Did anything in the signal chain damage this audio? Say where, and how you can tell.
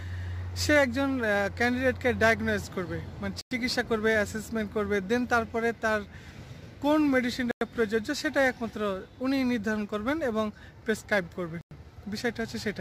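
Yes. Three holes of about 100 ms open at 3.41, 7.51 and 11.61 s, spaced 4.1 s apart. This is a gap between chunks: the audio was stored or played back in 4-second blocks, with silence inserted at each join.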